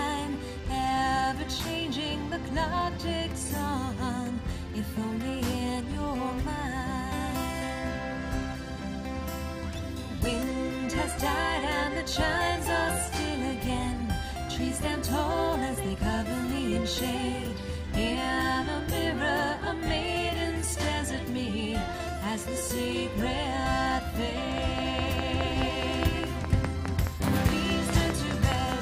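A train of clicks runs from 24.58 to 28.73 s: about twenty evenly spaced pops at 4.8 per second, roughly 20 dB above the sound, likely from electrical interference.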